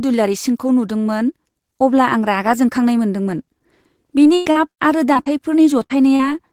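From 4.23 to 5.28 s comes repeated packet loss with a robotic sound. Six gaps land in quick succession, the longest about 100 ms, and each is patched by extending the last sound. About a quarter of that stretch is synthetic fill. Because the patches follow one another so closely, the speech turns choppy rather than showing one isolated smear.

Short concealed packet loss then occurs twice, at 5.86 to 5.92 s and at 6.16 to 6.21 s, each losing about 40 ms. The receiver bridges each hole from the preceding sound and blends back, so each is heard as a brief smear or wobble. Unlike a plain dropout, there is no silence in these gaps.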